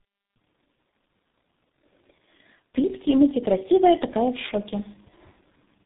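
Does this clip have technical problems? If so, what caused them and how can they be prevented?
Yes. Tandem speech coding runs throughout: two low-rate speech codecs in series, consistent with GSM full rate then G.723.1, stack their roughness and warble, with nothing above 3.8 kHz. Keep the call in one codec end to end, or use transcoder-free operation.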